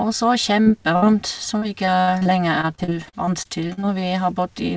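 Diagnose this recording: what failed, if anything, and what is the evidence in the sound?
Short concealed packet loss at 0.62 to 0.68 s, a network-stage fault. About 40 ms of the speech never arrived in time, and the receiver patched the hole by extending the preceding sound before crossfading back into real audio. The result is a brief smear in the line. The G.722 wideband path, with nothing above 8 kHz, is what carries the audio around it, so this is a transport gap rather than a codec fault.

Burst of packet loss at 0.96 to 1.04 s, again on the network side. This one is longer, about 60 ms lost consecutively. Concealment holds the last sound and lets it decay, so a voiced sound becomes a buzz that fades, or an unvoiced one a dying hiss. When real audio resumes, speech picks up past the hole and the intervening 60 ms is simply gone.

Repeated packet loss (robotic sound) from 1.58 to 3.85 s, a sustained network problem across more than two seconds. 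Around sixteen separate gaps occur, the longest about 60 ms, and together they cover roughly a fifth of the stretch, with about 0.44 s of speech lost in total. Each gap is filled by extending the prior sound, and the next arrives before the speech settles, producing a choppy, robotic texture with fragments missing throughout.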